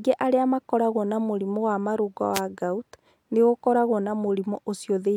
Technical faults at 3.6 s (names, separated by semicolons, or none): none